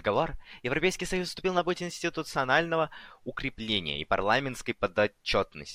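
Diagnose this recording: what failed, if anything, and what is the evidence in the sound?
Nothing failed: the speech carries no audible defect traceable to any stage of the chain.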